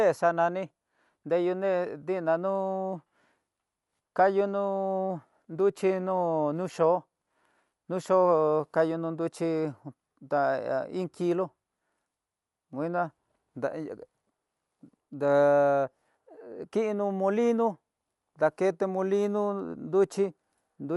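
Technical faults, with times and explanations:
Throughout, Dolby Digital compression: the speech is dull, with nothing above 11.5 kHz, and plainly audible codec damage shows as a rough, fluttering noise clinging to voiced sounds. This is likely a starved AC-3-style encoder, which fits a bitrate around 64 kbps. It narrowed the band and left many frequency lines without detail, and the decoder filled them with noise. Unlike a plain low-pass filter, the grainy noise moves with the speech rather than simply dulling it.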